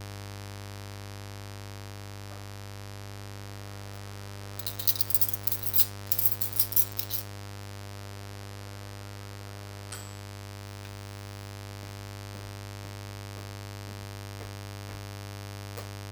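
A steady, raspy buzz sits under the everyday sounds from start to finish, fairly prominent at roughly 15 dB below them. This is mains buzz on a 50 Hz supply. Something like a dimmer, a rectifier or an unshielded lead let sharp switching spikes into the signal path. Those spikes recur twice per mains cycle and build a dense stack of 50 Hz harmonics reaching into the kHz range, giving the buzz its gritty edge rather than a smooth hum.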